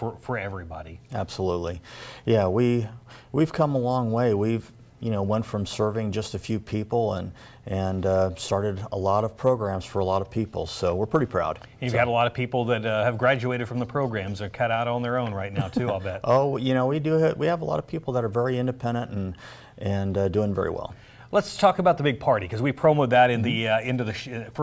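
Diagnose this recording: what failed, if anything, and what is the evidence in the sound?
Nothing failed; no stage shows any audible fault.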